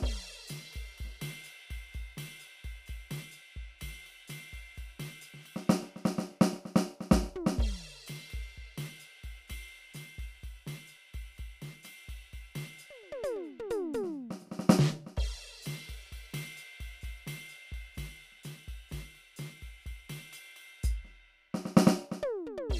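No technical faults are audible.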